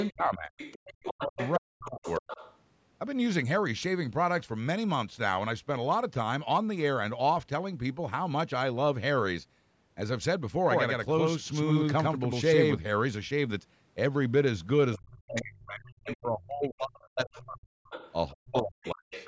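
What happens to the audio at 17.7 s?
Speech suppressed in double talk runs from 14.98 s and ends at 17.73 s, right at this moment. The talker's speech dips steeply, by roughly 40 dB at its deepest, losing level and breaking up while the other side is also talking. The likely cause is an echo canceller that cannot tell the near talker apart from the loudspeaker echo during overlapping speech, so it turns both down.

Overlapping this, from 17.01 s to the end at 19.27 s, the other side's voice is leaking through. A second voice sits under the talker at around 15 dB below them. This is likely residual echo: the far end plays from the talker's loudspeaker, and the canceller fails to strip all of it from the microphone signal, so it passes into the send path.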